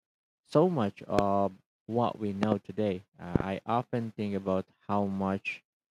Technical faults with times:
1.19-1.21 loud pop
2.43-2.54 loud pop
3.36-3.42 loud pop

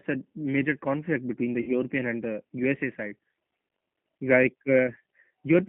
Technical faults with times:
0.00-5.68 G.729 codec
1.61-1.72 VoIP packet loss concealed by the speech codec

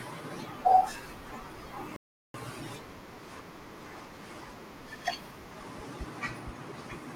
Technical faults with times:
1.96-2.34 playback stall

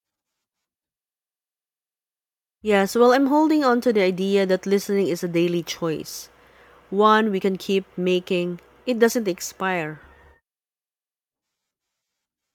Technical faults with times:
none

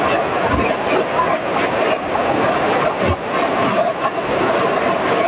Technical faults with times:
0.00-5.27 gain pumping

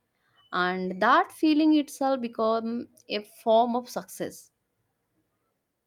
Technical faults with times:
none

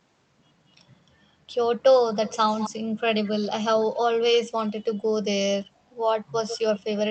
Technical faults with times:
2.14-2.70 echo leak
3.25-3.46 echo leak
6.46-6.80 echo leak

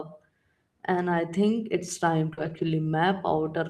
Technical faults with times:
1.13-1.19 lost packet rebuilt from error correction
2.33-2.39 short concealed packet loss
2.37-2.67 lost packet rebuilt from error correction

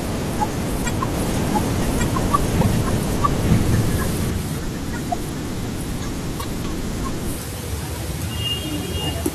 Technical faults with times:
1.14-4.30 doubled audio track
2.60-2.66 broken MP3 bit reservoir
6.39-6.45 broken MP3 bit reservoir

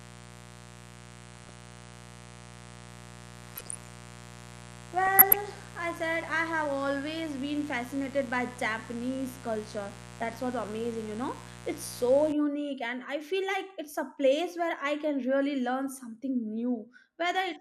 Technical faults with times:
0.00-17.60 MP2 compression
0.00-12.33 mains buzz
1.33-1.55 DAB burbling
3.43-3.94 DAB burbling
5.06-5.37 DAB burbling

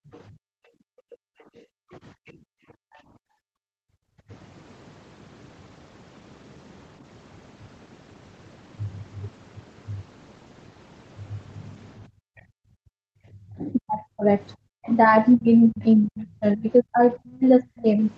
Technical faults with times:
0.00-4.29 background gated by the echo canceller
0.13-0.19 other side's voice leaking through
1.14-1.24 speech suppressed in double talk
1.92-2.33 other side's voice leaking through
12.07-13.30 background gated by the echo canceller
12.37-12.42 other side's voice leaking through
12.85-17.98 speech suppressed in double talk
14.84-14.95 other side's voice leaking through

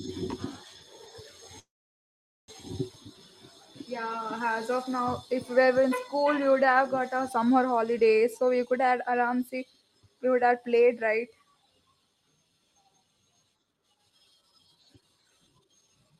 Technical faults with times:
1.59-2.50 call audio freeze
8.51-10.52 jitter buffer speed-up
14.96-16.20 jitter buffer speed-up

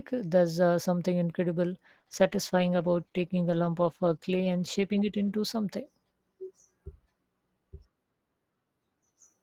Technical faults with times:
1.84-6.13 call bitrate drop

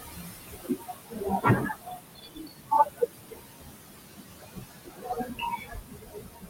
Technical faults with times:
0.00-6.49 noise suppressor artifacts
0.00-6.49 speech cut by the noise suppressor

